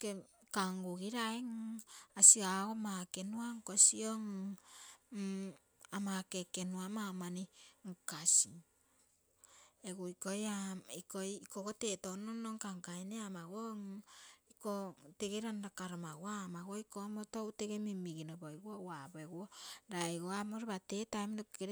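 No technical faults are audible anywhere in the recording.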